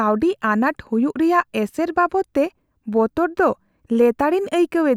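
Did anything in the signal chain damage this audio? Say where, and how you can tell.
No, nothing along the chain has left an audible mark on this speech recording.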